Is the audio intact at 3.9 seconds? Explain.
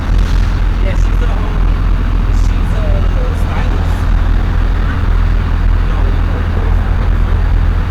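No. At 3.9 seconds, as through the whole clip, the sound carries a harsh, gritty fuzz on every loud moment rather than an occasional crackle. This is hard clipping. The signal is being driven about 7 dB beyond what the stage can pass, so its peaks are sliced off flat, and a sizeable share of the waveform, something like one sample in seven, sits on that ceiling. Those squared-off tops generate harmonics high up the spectrum, which is the fuzz you hear.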